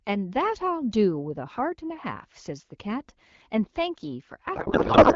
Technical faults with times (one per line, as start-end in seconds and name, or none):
4.55-5.15 codec payload misread